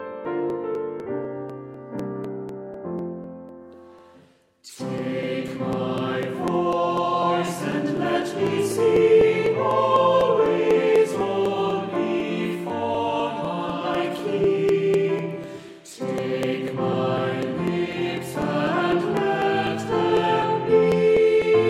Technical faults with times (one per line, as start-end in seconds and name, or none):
0.25-21.42 periodic USB or driver dropouts